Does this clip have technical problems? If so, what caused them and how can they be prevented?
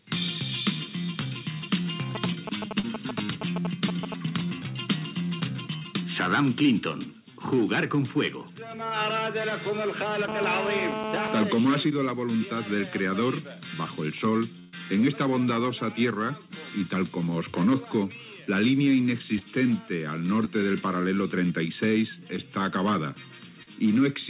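Yes. Short concealed packet loss appears at 1.82, 2.79, 19.39, 20.45 and 23.63 s. Each event is a gap of 20 to 40 ms, which fits one or two lost 20 ms packets. The receiver bridged it by extending the preceding sound, so it is heard as a brief smear or wobble. That brevity and blending distinguishes it from the longer dropout. A larger jitter buffer or forward error correction would prevent it.

GSM signalling bursts run from 2.15 to 4.14 s, a little below the level of the sound. They are a galloping pattern of ticks and short 217 Hz buzzes from a nearby 2G phone's radio pulses, rectified by the audio circuitry. The intermittent rhythm separates them from the steady buzz. Keep phones away from the equipment or use better-shielded gear.

GSM phone buzz runs from 10.28 to 11.44 s, about 4 dB below the signal. It is a continuous, harsh 217 Hz buzz rich in harmonics, from a 2G phone transmitting on an active call, and it is unbroken rather than galloping like the signalling bursts. 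Switch off nearby phones or move them several metres away.

A burst of packet loss lasts from 14.59 to 14.75 s, about 140 ms of missing audio. The decoder stretched the last sound into a held buzz or hiss that faded before the audio resumed further on. It is far longer than the short concealed losses. A steadier network connection or redundancy coding would prevent it.

The G.711 A-law call path, with nothing above 4 kHz, is working normally.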